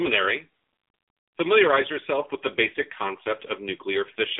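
Throughout, the speech carries AMR narrowband mobile codec damage. Nothing passes above 3.8 kHz, and the band sits roughly between 250 Hz and 3.7 kHz. The heavy buzzy, synthetic quality from coarse pulse-driven vocal-tract modelling fits a low mode near 6.7 kbps.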